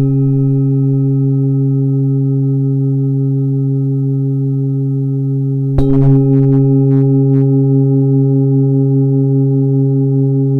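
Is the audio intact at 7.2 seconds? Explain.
No, 7.2 s falls inside a stretch of hard clipping from 5.78 to 7.43 s, where peaks driven about 6 dB past the limit get sliced flat, adding a harsh, crackly fuzz.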